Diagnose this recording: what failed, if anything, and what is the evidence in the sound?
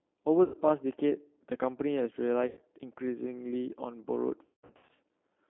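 The codec stage is the G.729 codec, here apparently the G.729A variant at 8 kbit/s. It models each 10 ms frame from a vocal tract filter, a pitch predictor and a sparse pulse excitation rather than coding the waveform. Throughout, the speech sits in a narrow telephone band of roughly 250 Hz to 3.5 kHz. It has a plainly audible rough, slightly synthetic texture, because the sparse pulses only approximate the true excitation.

In the network stage, VoIP packet loss was concealed by the speech codec three times. The first two dropouts, at 0.44 to 0.57 s and 2.47 to 2.61 s, each sound like roughly 100 ms of missing audio. There the decoder carries its last pitch and filter forward as a fading extension. The third, from 4.45 to 4.90 s, is scattered over about 440 ms, with a longest gap near 180 ms. The voice stays weakened and smeared between gaps because each frame is rebuilt from the last.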